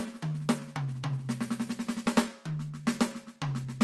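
Short musical excerpt carried over a call link whose top end stops around 12 kHz. From 0.06 to 3.66 s the receiver makes small, unevenly spaced repeated timing corrections, repeating slivers that stretch playback to 96% speed and add roughly 150 ms. Underneath is clock drift between sender and receiver, with the sender's clock running a few percent slow so the jitter buffer keeps draining.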